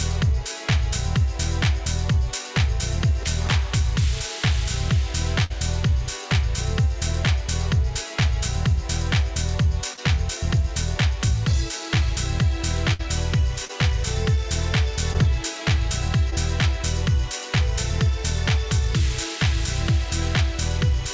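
At 5.44 to 5.52 s a burst of packet loss removes about 60 ms of audio. The receiver continues the last sound, fading it out over roughly 59 ms, then jumps ahead. On a spectrogram this shows as smeared, frozen partials dimming into a dark gap, and then a sudden restart. The same thing happens again at 12.93 to 13.01 s.

Short concealed packet loss affects 9.94 to 9.99 s and 13.65 to 13.71 s, where about 40 ms is lost, and 15.13 to 15.16 s and 16.30 to 16.34 s, where about 20 ms is lost. In each case the decoder patches the hole by extrapolating the preceding sound, which you hear as a brief smear or wobble. On the waveform these show as short stretches that are overly smooth or repeat themselves.

Across the whole clip the spectrum stops at 8 kHz, which points to the G.722 call codec at about 64 kbps.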